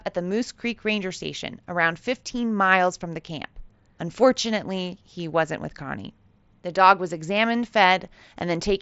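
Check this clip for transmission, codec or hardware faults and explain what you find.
No transmission, codec or hardware faults turn up anywhere in the speech. It has passed through a Bluetooth mSBC headset codec working as intended, so the sound stops at about 7.7 kHz and carries a light grain on its louder moments.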